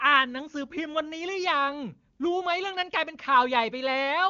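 No technical faults detected.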